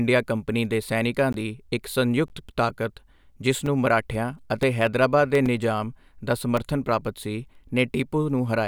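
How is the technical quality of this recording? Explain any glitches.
The speech is marred by two kinds of fault: five short dropouts and a burst of rhythmic ticks.

Blocks of digital silence occur at 1.33, 2.28, 3.66, 5.46 and 6.57 s, lasting about 16, 17, 5, 5 and 3 ms. The output buffer likely went unfilled, so samples dropped to silence with hard edges. The longer ones sound like tiny holes and the shorter ones like ticks. A waveform shows flat lines, and a spectrogram shows thin vertical gaps edged by broadband clicks.

CD scratch ticks run from 4.14 to 5.35 s: six ticks, the longest around 2 ms, roughly four a second, once per disc revolution. The damage exceeded error correction, so samples were muted or interpolated. They appear as regularly spaced vertical streaks on a spectrogram and as small notches in the waveform.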